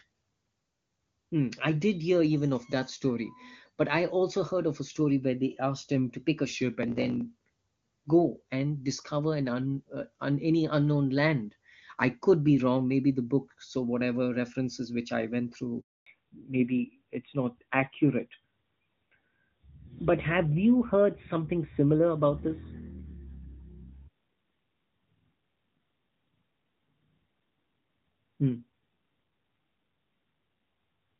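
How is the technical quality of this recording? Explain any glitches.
The recording has two linked faults in the middle of the call: a brief dropout, then a lasting loss of bandwidth.

Handover gap at 15.80 to 16.06 s, just after "references which I went": the call switched networks and no speech frames arrived for 260 ms. The voice cuts off quickly into silence, and whatever was said in that interval is gone.

Fallback to narrowband from 16.06 s to the end: after the switch the link dropped from the clear HD Voice path, which fits AMR-WB at 23.85 kbit/s, to an older codec, which fits AMR-NB at 12.2 kbit/s. Nothing above 4 kHz remains, so the speech sounds duller and rougher.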